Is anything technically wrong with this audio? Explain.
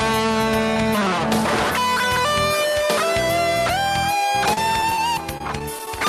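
Yes. Repeated packet loss (robotic sound) occurs from 4.53 to 4.99 s and from 5.38 to 5.87 s. Short dropouts, the longest 38 ms, are each patched by extending the preceding sound, producing choppy stretches with missing fragments.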